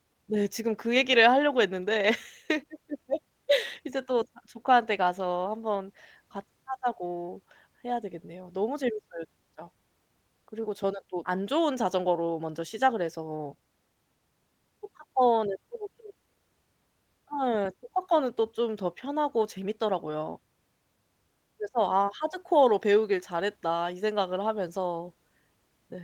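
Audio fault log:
11.23–11.36 s skip ahead: playback jumps forward, dropping roughly 0.7 s of speech that arrived while later audio was already queued. The two sides are joined directly with no silence, unlike a dropout, which leaves an audible gap or fill.
11.85–12.40 s jitter buffer speed-up: to shed surplus delay, the receiver trims short pitch-period pieces repeatedly, running speech at about 110% speed and removing roughly 70 ms. Pitch stays unchanged, so it sounds briefly hurried rather than chipmunk-like, with no single abrupt jump.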